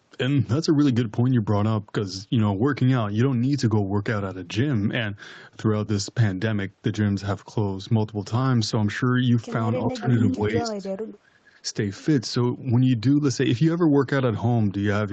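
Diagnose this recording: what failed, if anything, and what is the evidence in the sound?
From 9.85 to 10.06 s the speech dips briefly, about 10 dB at its deepest over roughly 150 ms, then from 10.3 to 11.53 s it is pushed down much harder, about 30 dB at worst, for around a second in total. This is likely speech suppressed in double talk, at the call processing stage: with both ends active, the echo canceller could not tell this talker from the returning loudspeaker signal and attenuated everything.

Between 10.28 and 10.36 s a short scrap of the voice returns about 370 ms late, only about 5 dB below the live speech. This is likely an echo leak, again in call processing: one side was on a loudspeaker, and its echo canceller failed to remove all of the sound its microphone picked up, so a delayed residue travelled back. It lands inside the suppressed stretch, consistent with the canceller struggling during double talk.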